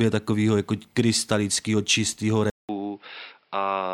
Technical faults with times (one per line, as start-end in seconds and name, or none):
2.50-3.93 input switched to a poorer device